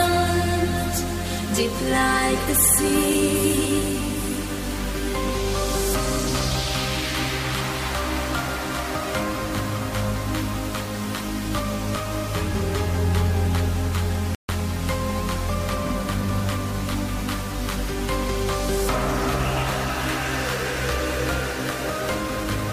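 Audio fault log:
14.35–14.49 s, playback stall: the player likely ran short of buffered data or had its output thread blocked, so nothing reached the output for about 141 ms. The sound cuts out abruptly in mid-flow, leaving a clear gap of silence before it picks up again.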